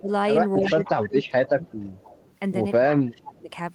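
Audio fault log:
0.01–0.1 s, 0.59–1.91 s and 2.85–3.5 s, speech suppressed in double talk: the speech sinks in level, by about 10 dB at the start, then about 20 dB through the long middle stretch and about 25 dB near the end. It dips and recovers instead of staying steady. This is likely an echo canceller that couldn't tell the near talker from the far side's echo while both were talking, so it turned everything down.
0.57–0.77 s, 1.83–2.36 s and 3.15–3.19 s, echo leak: a delayed copy of the speech trails it by 291 ms. It's about 10 dB under the speech in the first patch, then drops to about 30 dB and about 35 dB below in the later scraps. The cause is likely a loudspeaker on the far end whose echo canceller didn't scrub all of what its mic picked up, so part of the audio came back.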